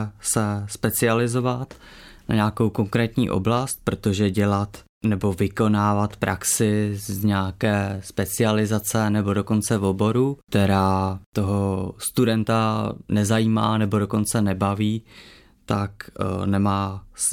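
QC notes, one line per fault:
No faults found in this speech recording.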